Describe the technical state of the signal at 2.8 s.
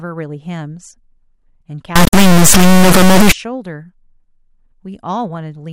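At 2.8 s the signal is in an integer read as float fault, running from 1.96 to 3.32 s. The 32-bit integer samples are read as 32-bit floats. The values swing between near zero and full-scale clipping. This gives an extremely loud, buzzing square wave.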